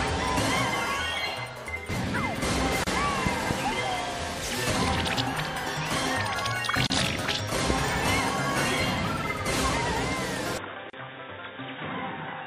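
MP3 compression runs throughout. The treble is cut off and the texture turns watery and swirly, with smeared attacks and metallic chirps on sibilant or bright moments. This likely comes from a low-bitrate encode, and the damage fits about 64 kbps, where bits run short and weak frequency lines switch on and off between frames.

A gap at a join of encoded pieces opens at 2.84 s, 6.87 s and 10.90 s, repeating every 4 s. Each is a dropout of about 31 to 32 ms in continuous sound. The encoder's start delay and end padding were left in when separately encoded chunks were joined, and the sound picks up exactly where it stopped.

A loud pop arrives as two sharp hits between 3.27 and 3.53 s, and again as a single hit at 7.70 to 7.73 s. Each hit peaks well above the signal, around 15 dB over it, while the sound carries on underneath. A likely cause is a voltage spike from a plug, switch or static discharge, shaped by the circuitry after it.

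An input switched to a poorer device takes over at 10.58 s and lasts to the end. The sound turns dull and boxy with nothing above 3.8 kHz, drops a few decibels in level, and gains a new noise floor roughly 30 dB down. There is no silence at the changeover. The likely cause is the system moving to a narrower-band microphone or a headset's call profile.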